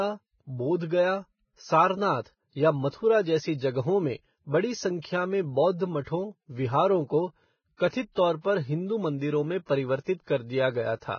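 From start to finish the speech sounds hissy and grainy, with roughened tones, smeared consonant attacks and nothing above 6.6 kHz. This is likely heavy Vorbis compression at a very low bitrate, around 16 kbps, where coarsely quantised treble detail turns into noise.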